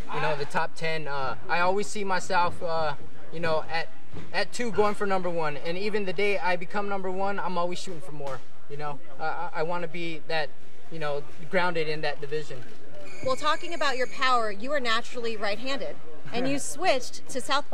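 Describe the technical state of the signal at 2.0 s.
At 2.0 s nothing unusual reaches the ear from this fault, yet a DC offset is present there, as it is across the entire clip. The waveform sits shifted away from zero by a constant amount of about -22 dBFS, so it swings around a displaced centre line. That steady component carries no audible content; it appears as fixed energy at 0 Hz at the very bottom of the spectrum and eats into headroom, leaving less room before peaks clip.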